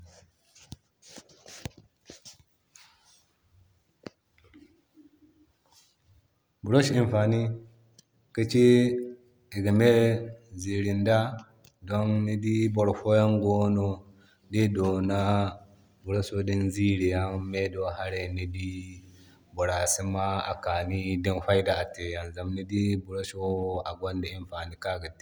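No technical faults can be heard anywhere in this recording.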